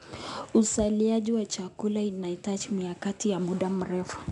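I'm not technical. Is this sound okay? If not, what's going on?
No. The recording was squeezed with 4-bit ADPCM compression, which stores each moment as a rough guess from the last one. That leaves a gritty hiss riding on the speech from start to finish, rougher on sudden sounds, and nothing above about 10.6 kHz, so it sounds dull.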